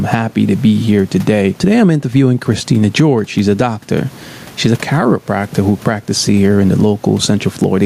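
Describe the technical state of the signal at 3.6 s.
At 3.6 s you're in the middle of gain pumping, which runs through the whole clip. The level swings by around 15 dB, likely from gain set far too high with a fast limiter or compressor clamping down on loud sounds. The room noise sits about 38 dB below the speech, and everything sounds squashed.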